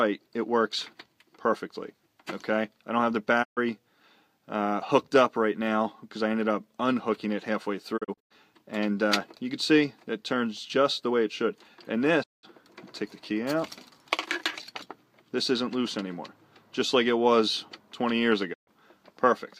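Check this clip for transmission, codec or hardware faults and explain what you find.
Four digital broadcast dropouts occur, at 3.42–3.59 s, 7.96–8.32 s, 12.22–12.45 s and 18.52–18.69 s. Each time the receiver stopped getting valid frames and muted, fading out over 20 ms and returning once clean frames resumed. The holes total 128 ms, 192 ms, 192 ms and 128 ms, consistent with dropping a few frames of roughly 32 ms each. The 8 s event is a cluster of short holes spread over 320 ms, the longest 96 ms. On a spectrogram these appear as full-band blank columns, and on the waveform as flat gaps with brief tapered edges.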